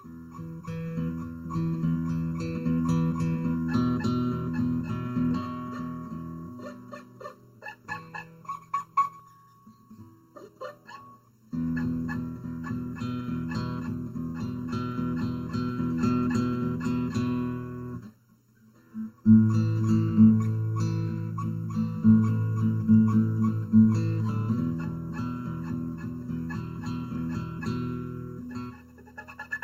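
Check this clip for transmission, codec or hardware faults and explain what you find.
Three faults are present: comb filtering throughout, a skip ahead, and a jitter buffer speed-up.

Channel delay (comb filtering) runs through the whole clip. One channel lags by roughly 0.7 ms before the mono sum, cutting evenly spaced notches from about 700 Hz upward and leaving a hollow, phasey tone.

A skip ahead occurs at 9.19 s. Roughly 400 ms of audio was dropped while later audio waited, so playback jumps forward with no audible gap.

A jitter buffer speed-up follows from 9.37 to 11.33 s. Repeated pitch-period cuts totalling about 200 ms run the audio at 108% speed with unchanged pitch, making it sound hurried.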